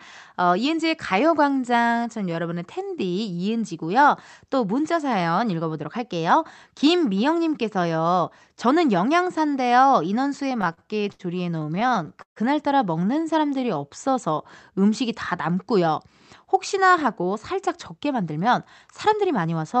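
From 10.61 to 11.21 s and again from 11.57 to 12.38 s the speech suffers repeated stalls (stutter): packets arrived late, the jitter buffer kept emptying, and the receiver stretched the last sound to cover five and then ten short gaps, the longest about 71 and 141 ms. On a waveform these show as repeated, smeared copies of the preceding cycle, sometimes fading, with steady horizontal bands on the spectrogram.

Between 13.07 and 14.36 s a jitter buffer slow-down plays the speech at 93% speed, repeating pitch periods to add 94 ms of reserve. Sounds drag at unchanged pitch, and the spectrogram shows harmonics held flat for slightly too long.

At 16.74 to 18.47 s and 18.88 to 19.75 s a jitter buffer speed-up trims pitch periods to shed excess delay, about a tenth of a second and then about 70 ms, running at 106% and 107%. The speech sounds hurried but keeps its pitch, with syllables visibly compressed in time and the spectrum cut off at 8 kHz by the call codec.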